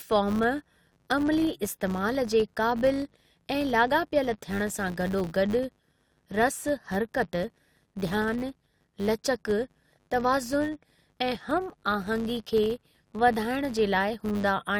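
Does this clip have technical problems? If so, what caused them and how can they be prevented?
Yes. Throughout the speech there is a filter restarted on every block: the filter loses its memory at each block boundary and begins again from silence, so every block opens with a small transient. These land 100 times per second, heard as a 100 Hz buzz that rises and falls with the speech level and points to 10 ms blocks. A spectrogram shows faint vertical lines every 10 ms and a comb of harmonics at multiples of 100 Hz. The waveform shows small level-dependent spikes at regular intervals. Carrying the filter state from one block to the next prevents it.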